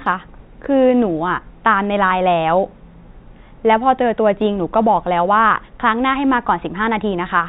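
Nothing in this speech recording points to a technical fault. It carries the sound of G.711 telephone coding, with nothing above 4 kHz and only a faint quantisation hiss that rises and falls with the level of the speech.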